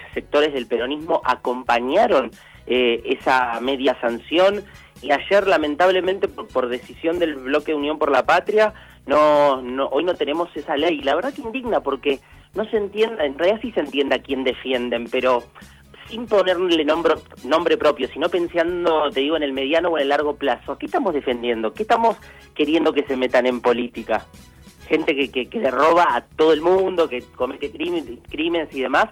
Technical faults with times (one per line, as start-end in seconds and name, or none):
1.45-2.16 CD scratch ticks